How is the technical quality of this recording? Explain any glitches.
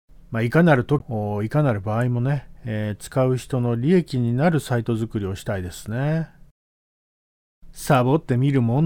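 The recording has one audible glitch, a short burst of damaged data in a compressed stream from about 0.97 to 1.01 s, early in the speech. For roughly 40 ms part of the encoded data was corrupted, so the decoder could not interpret those frames correctly, lost synchronisation and had to hunt for the next valid frame header before normal decoding resumed. It is heard as a brief chirp, squawk, click or short hole cutting into the speech.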